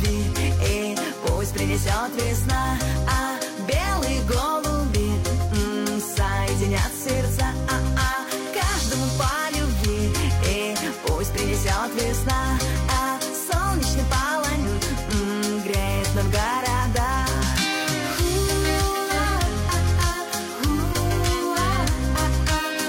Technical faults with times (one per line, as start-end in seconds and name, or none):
10.77 repeated buffer
14.59-14.65 compressed frames skipped
20.94 repeated buffer